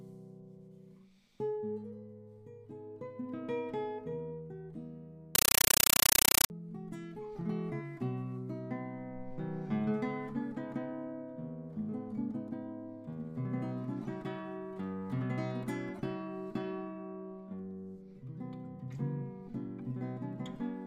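From 5.35 to 6.50 s the sound is replaced by very loud, harsh static that chatters at a steady 31.25 times a second, each 8 ms burst of noise followed by silence. This is a compressed stream played as audio: an AC-3 (Dolby Digital) bitstream was passed to the output as if it were ordinary samples instead of being decoded. The density of the bursts points to a 384 kbps stream.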